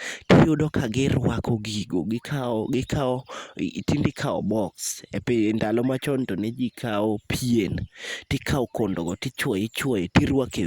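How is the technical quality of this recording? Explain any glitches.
No glitches or technical faults can be heard here.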